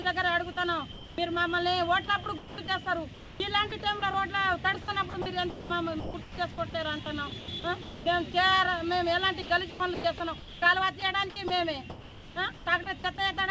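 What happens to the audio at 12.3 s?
The sound is chopped by the voice detector here: the sender's detector was likely switching transmission on and off from 9.42 to 13.04 s, replacing about 1.2 s with comfort noise. At 12.3 s the audio is choppy.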